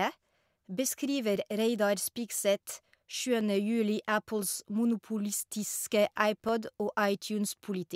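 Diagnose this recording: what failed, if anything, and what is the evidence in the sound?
Clock drift buffer slips, from 0.33 to 7.51 s: a regular click in the speech about every 1.03 s, roughly seven in all. The likely cause is a buffer-stage mismatch between two device clocks, off by roughly 300 ppm, so about 15 samples are dropped or repeated at each slip.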